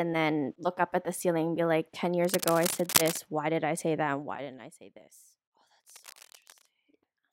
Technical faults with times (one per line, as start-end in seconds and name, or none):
2.25-3.18 cable scratch noise
3.95-5.03 zipper noise
5.88-6.66 cable scratch noise